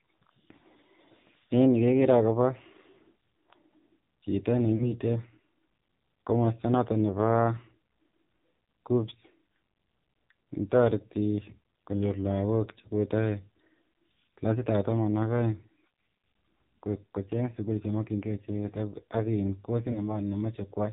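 AMR narrowband mobile codec runs through the whole recording. The speech has been squeezed into the 8 kHz-sampled mobile channel, so nothing above 4 kHz survives, and the codec rebuilds the voice from a vocal-tract model driven by sparse pulses. The damage is heavy. The voice sounds buzzy and synthetic, with a hollow, telephone-band dullness, which points to one of the low AMR-NB modes around 6 kbps.

Lost AMR speech frames occur at 4.76 to 4.98 s, at 12.82 to 12.88 s just after "konyoor lagook che", and at 19.92 to 20.17 s. In each case, corrupted frames forced the decoder to conceal the gap by reusing the last good pitch and vocal-tract settings at lowered gain. The first and last gaps cover about 40 ms of missing audio and smear into a short drawn-out stretch that fades toward silence, with the voice returning rough. The middle gap covers 20 ms and is a brief dip.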